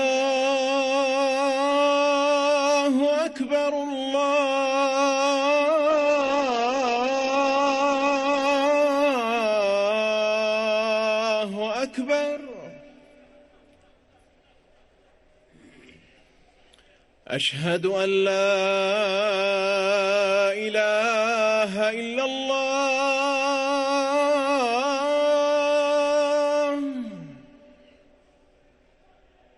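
From 5.91 to 10.73 s, a call bitrate drop starves the encoder, consistent with about 9 kbps, so the sound turns coarse and muffled, cut off above 8 kHz.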